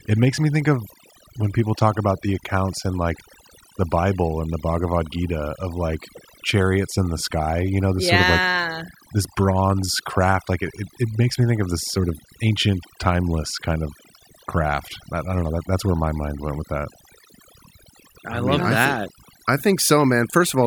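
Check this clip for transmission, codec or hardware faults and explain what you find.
Overdone noise removal runs through the whole speech clip. A noise reduction stage was set too aggressively for the background it was cleaning. Every frequency band that sits close to the tool's noise estimate gets pushed far down or shut off, and the quieter parts of the voice fall below that line and are cut along with the noise. The background level drops and breaks up into twinkling, warbling specks that come and go between and under the voice.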